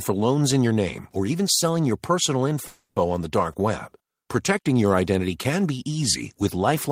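At 2.67 s, just after "even selling your personal", a call audio freeze begins. The last sound stretches into a fading buzz or hiss, then briefly goes silent. At 2.99 s the speech resumes where it stopped, nothing lost. Packets were likely held up, emptying the jitter buffer.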